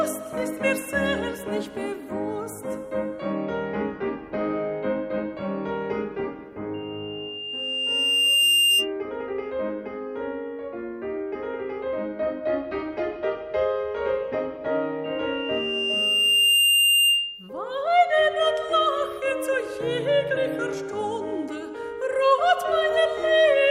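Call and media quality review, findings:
Loudspeaker feedback squeal, twice: 6.74–8.92 s and 15.04–17.50 s. Single tone at 2.8 kHz swelling over about a second and a half, ending up roughly 10 dB over the program. Mic is picking up its own speaker and loop gain tops unity at that frequency. Same pitch both times, so same acoustic path. Worth notching 2.8 kHz or pulling the mic/speaker gain back.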